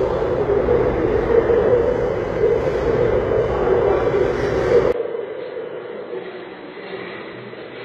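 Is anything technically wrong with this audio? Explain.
Yes. Throughout the clip the treble sounds gritty and metallic, with nothing above about 14.9 kHz. This is likely HE-AAC compression, consistent with a low bitrate around 20 kbps. The codec keeps the lower spectrum and rebuilds the top by copying bands upward, so the treble's harmonics don't line up with the sound below.

At 4.92 s a brief 20 ms gap is followed by audio that is suddenly dull and boxy, roughly 10 dB quieter, cut off above 4.2 kHz, and carrying a faint new background noise well below the signal. It stays this way to the end. The likely cause is the input switching to a poorer device, whose narrower band, lower gain and own noise replace the original microphone's.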